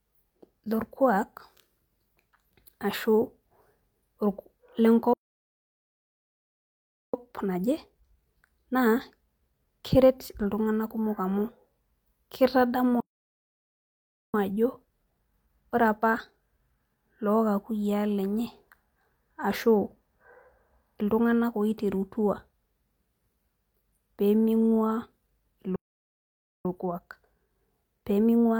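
The speech cuts out in a playback stall from 5.13 to 7.14 s, 2.0 s of silence that shows as a flat line in the waveform and a blank vertical band on a spectrogram. The likely cause is the player running out of data or its thread being blocked. After the stall, time-compressed catch-up runs from 7.14 to 10.14 s at 1.15 times normal speed. The player trims its backlog by removing small pieces and cross-fading across the joins, so the speech sounds hurried but keeps its pitch. On a spectrogram the harmonic spacing stays the same while syllables pack closer together.

The same pattern repeats twice. A 1.34 s stall runs from 13.00 to 14.34 s, followed by catch-up at 1.1 times speed from 14.34 to 17.34 s. A 0.89 s stall runs from 25.76 to 26.65 s, followed by catch-up at 1.1 times speed until the end.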